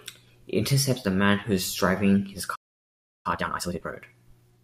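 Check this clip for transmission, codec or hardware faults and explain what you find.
Two faults are audible, a stall and a hurried recovery.

At 2.55 s the speech cuts to silence for about 0.69 s. This playback stall was likely caused by the player starving for data.

From 3.26 to 3.94 s comes time-compressed catch-up. Small pieces are cut and cross-faded, so speech runs at twice speed, normal pitch.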